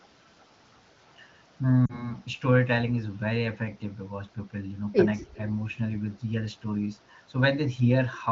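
At 1.85 s the speech stumbles, and the disturbance lasts until about 2.12 s. These are lost AMR speech frames. Radio errors corrupted the frames, so the wideband decoder reused its last good pitch and vocal tract settings at falling gain. The gap points to about two frames, some 40 ms. The sound smears briefly and dips, then recovers weak and rough before steadying. Around it, the AMR-WB coding keeps speech clear and light.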